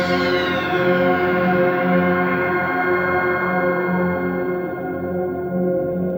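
Nothing in the audio stood out as a problem on listening.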